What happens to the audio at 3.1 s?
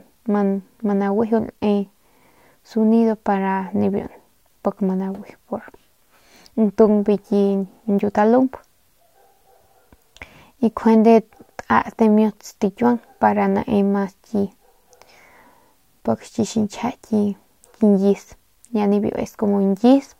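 At 3.1 s the speech carries a grainy distortion that rises and falls with the sound, the same as throughout the clip. The likely cause is low bit depth without dither: samples truncated to a coarse grid, which fits about 10 bits, leaving error roughly 50 dB below the signal. Unlike steady hiss, the grit tracks the speech, and quiet tails sputter or drop out.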